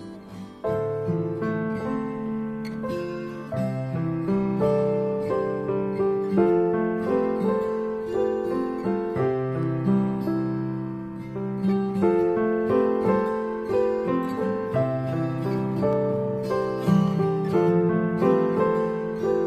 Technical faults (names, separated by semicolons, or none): dropped samples